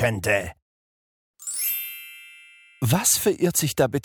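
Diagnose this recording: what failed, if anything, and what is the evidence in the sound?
Sample clock jitter at the converter, present throughout: an unsteady sampling clock, jittering on the order of a microsecond or two, mistimes samples, adding roughness around 30 dB below the signal that grows on steep, loud passages.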